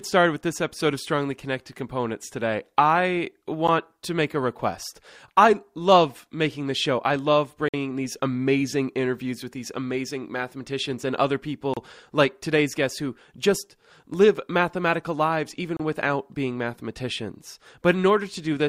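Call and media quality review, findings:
Gap between stream segments, speech: hard-edged silent holes at 3.67 s (about 11 ms), 7.69–7.74 s (52 ms), 11.74–11.77 s (30 ms) and 15.77–15.80 s (30 ms), recurring every 4 s. Probable component is the segmenter or player timeline, where mismatched segment timestamps leave gaps that get filled with silence. Unlike packet loss or dropouts, no audio goes missing. Speech resumes exactly where it stopped, only later, and the regular 4 s spacing matches segment boundaries.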